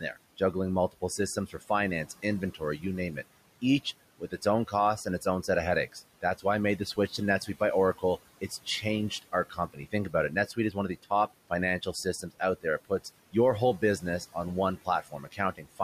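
Noise suppressor artifacts run through the whole recording. The suppressor pulls the room noise, which sits about 19 dB below the speech, down by about 17 dB between phrases. On a spectrogram, the background floor pumps up and down with each phrase.

From 0.01 to 3.18 s there is speech cut by the noise suppressor. It misreads soft consonants and word endings as noise and drops them by up to about 16 dB, roughly half a second in total. They sound swallowed, and the waveform shows phrase tails clipped short.

The same speech cut by the noise suppressor returns from 3.83 to 15.8 s. It is deeper here, up to about 18 dB, and affects roughly two seconds in all. Quiet syllables fade into the gated background, and the spectrogram shows gaps in the high-frequency consonant energy.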